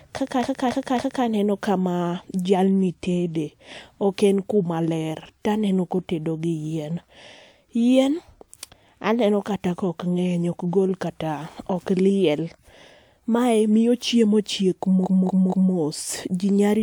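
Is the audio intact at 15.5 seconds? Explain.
No. Just after "mae miyo chiemo chiek", from 15.03 to 15.72 s, repeated frames replay a 232 ms block three extra times, a stutter adding 0.70 s, which fits a run of about five compressed frames. A spectrogram or waveform shows that identical block tiled back to back.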